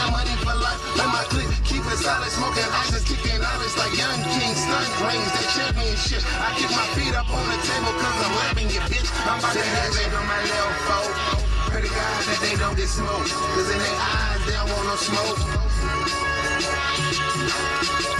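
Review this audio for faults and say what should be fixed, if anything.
No faults; nothing needs fixing.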